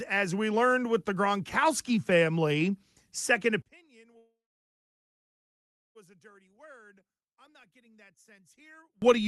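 At 3.62 s the speech suddenly drops by about 30 dB and turns faint. It stays that way until 9.02 s. The likely cause is one channel inverted. One stereo channel has flipped polarity. When the two channels are summed to mono, the shared centre content cancels. The voice and its low end nearly disappear. Only the faint difference between the channels remains.

From 4.17 s to 5.97 s the audio stalls. The last sound smears briefly, then about 1.6 s of silence follows. This points to a call audio freeze. Packets were likely delayed, and the jitter buffer ran dry. The receiver bridged the wait with about 1.8 s of filler. When the packets arrived, playback resumed where it had stopped. Nothing was lost, but everything after that point plays about 1.8 s late. The call codec's top end, near 12 kHz, can be heard around these faults.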